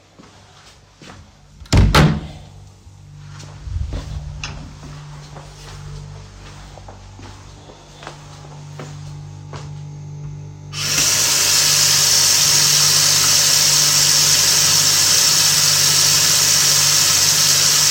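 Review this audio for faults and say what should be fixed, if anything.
A harsh fuzz covers the loud sound from 1.73 to 2.06 s. This is hard clipping: the signal overdrives a stage by about 12 dB, its peaks are cut flat, and the flattened tops add high harmonics. Preventing it means reducing gain before that stage, leaving headroom above the loudest peaks.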